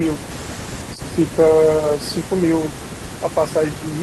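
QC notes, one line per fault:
Nothing stood out on listening to this speech recording.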